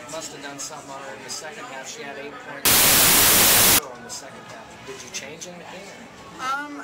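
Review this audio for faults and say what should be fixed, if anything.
From 2.65 s to 3.79 s, about 1.1 s, the audio turns into loud, harsh broadband noise: samples built from the wrong bytes. For that stretch the decoder assembled each sample from mismatched bytes, whether shifted by one, swapped in order or read at the wrong alignment, so the rapidly changing low-order bits landed in the high-order positions and now dominate every value. The original signal is masked. To fix it, re-read that segment with the correct byte order and alignment, and prevent a recurrence by checking the declared sample format and endianness against the data and keeping every read aligned to whole-sample boundaries.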